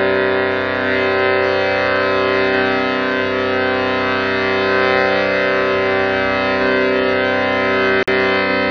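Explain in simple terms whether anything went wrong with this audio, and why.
At 8.03 to 8.08 s the sound drops to silence for about 50 ms, then resumes. This is likely a Bluetooth stall: wireless interference delayed audio reaching the headphones.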